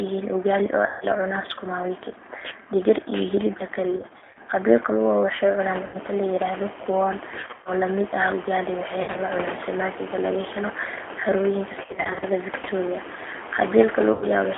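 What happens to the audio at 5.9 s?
From 5.86 to 5.97 s the speech smears into a fading buzzy tone or coloured noise, then stays weak briefly. This is VoIP packet loss concealed by the speech codec. Roughly 80 ms went missing, and the decoder filled the gap by repeating its last pitch and filter at falling gain. The narrow, slightly synthetic G.729 codec sound (300 Hz to 3.4 kHz at 8 kbit/s) continues through this moment.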